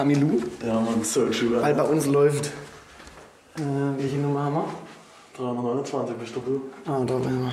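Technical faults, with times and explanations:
7.51 s, GSM phone buzz: a nearby 2G handset on a call was transmitting in regular bursts, and the audio circuitry rectified those radio pulses into the signal path. The result is a hard, raspy buzz at about 217 Hz, rich in harmonics and unrelated to the sound, sitting about 25 dB below the signal. Because the phone was in a call the bursts were steady, but the buzz appears only in this last brief moment of the clip.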